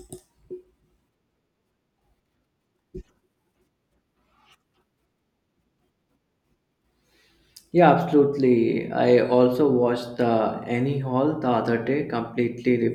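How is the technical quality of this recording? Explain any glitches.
No technical faults are audible.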